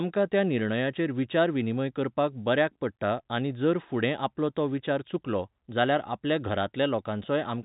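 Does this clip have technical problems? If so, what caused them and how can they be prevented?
No, nothing in this speech clip points to a technical problem. The G.711 telephone coding is working as intended, with nothing above about 3.8 kHz, which fits the 8 kHz sampling of a phone line, and at most a faint trace of its level-following quantisation noise.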